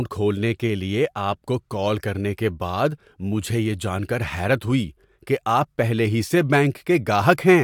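Nothing in the recording stood out as a technical problem on listening.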